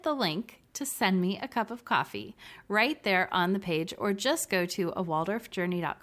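Nothing technically wrong turns up anywhere in this short bit of speech, so there's no time or cause to point to.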